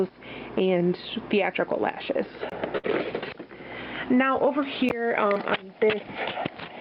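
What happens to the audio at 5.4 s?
Right at 5.33 to 5.37 s there is a short concealed packet loss. About 20 ms of audio failed to arrive in time, and the decoder bridged the gap by extending the preceding sound before crossfading back, heard as a brief smear or wobble.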